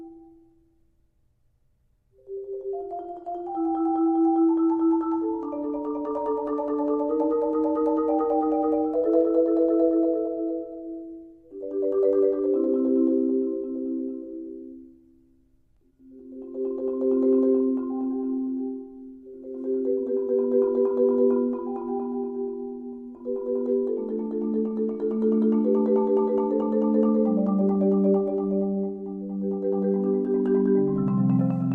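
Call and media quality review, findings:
No audible defects found in the signal path; level, continuity and timing hold steady throughout, with nothing to attribute to capture, transport or playback.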